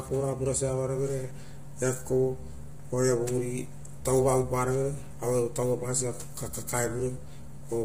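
Speech throughout, with heavy low-delay AAC compression damage across the whole 7.8 seconds. The voice sounds rough and grainy, with noise filling the gaps between pitch harmonics, and nothing is present above about 15.6 kHz. This points to AAC-ELD at around 24 kbps. Its short frames resolve harmonics poorly and use up bits, so the encoder fills the spectrum with noise. The likely cause is a video-call style low-delay encoding path.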